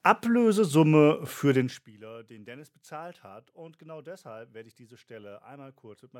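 Listening through the recording, nothing stood out as a technical fault at any point.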